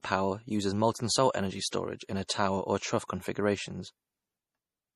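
Speech throughout the clip sounds dull, with nothing above 13 kHz and the coarse artefacts of heavy compression. This is likely low-bitrate audio saved at a high bitrate. The sound fits a 40 kbit/s MP3 re-encoded at 320 kbit/s, which cannot restore the detail the first encoding discarded.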